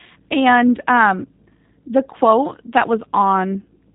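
The speech here has been squeezed throughout by the G.729 codec, which rebuilds each 10 ms frame from a vocal tract filter, a pitch estimate and a few pulses at a rate that fits 8 kbit/s, so the voice sounds plainly rough and synthetic, with nothing above about 3.8 kHz.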